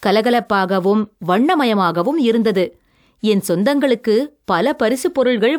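No technical faults are audible.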